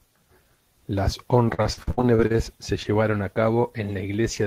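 From 1.45 to 2.37 s the speech turns choppy and robotic: repeated packet loss, with holes up to 65 ms patched by stretching earlier sound, about a third of the stretch. At 2.83 to 2.87 s a brief smear marks short concealed packet loss, where roughly 20 ms never arrived and was filled from the preceding audio.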